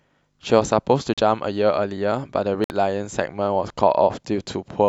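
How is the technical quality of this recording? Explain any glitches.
The speech breaks up twice with brief dropouts. At 1.14 s the sound cuts to silence for about 41 ms, and at 2.64 s for about 58 ms. Each time it resumes abruptly, as if paused and released. These are most likely Bluetooth stalls: radio interference delayed the wireless packets, the headphones' small playback buffer emptied, and output stopped until retransmitted audio arrived and filled it again.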